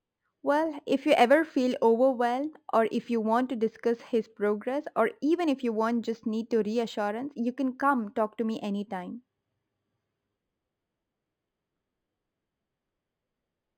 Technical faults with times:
0.00-13.77 imaging from linear upsampling

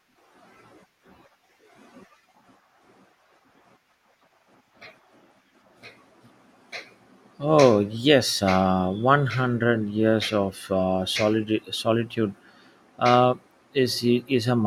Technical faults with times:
none

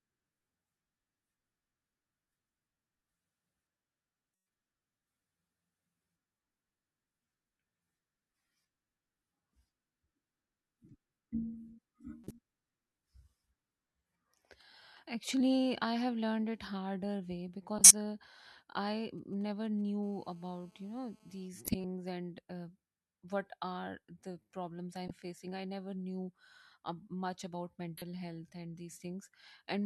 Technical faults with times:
12.24-12.31 corrupt frame decoded
17.78-17.91 corrupt frame decoded
19.18-19.90 GSM signalling bursts
20.03-21.48 GSM phone buzz
21.65-21.84 corrupt frame decoded
25.08-25.14 corrupt frame decoded
27.97-28.02 corrupt frame decoded

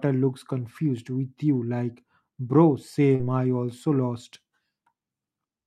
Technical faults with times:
3.15-3.21 short concealed packet loss

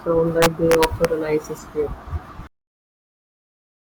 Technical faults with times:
0.42-1.05 integer overflow

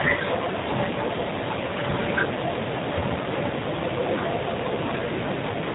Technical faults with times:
0.00-5.75 G.729 codec

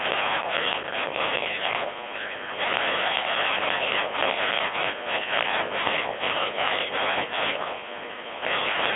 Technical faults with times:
0.00-8.95 mains buzz
0.00-8.95 Codec 2 vocoder

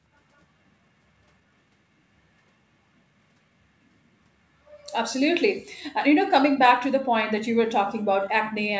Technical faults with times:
4.85-5.10 echo leak

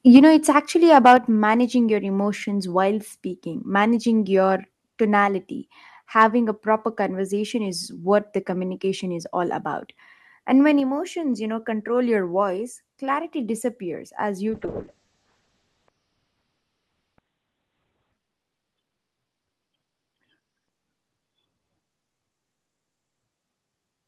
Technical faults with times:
0.15-0.27 microphone overload
0.17 microphone volume stepped down
0.96-1.14 microphone overload
1.17 microphone volume stepped down
14.49-24.07 call bitrate drop

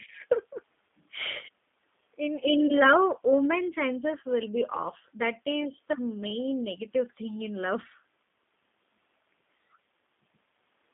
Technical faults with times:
0.00-10.94 G.729 codec
2.67-2.72 VoIP packet loss concealed by the speech codec

